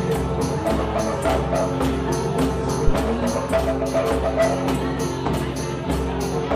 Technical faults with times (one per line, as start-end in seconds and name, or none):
2.87-2.92 phantom power thump